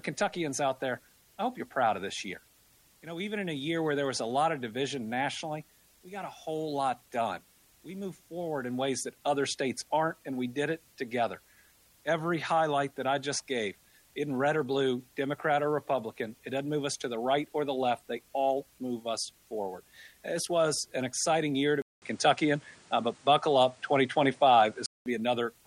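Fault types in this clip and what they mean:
Input switched to a poorer device: 21.82–25.06 s, after a 200 ms gap, sound dulls to nothing above 9.7 kHz, with a level shift and added background noise, likely a narrower-band input.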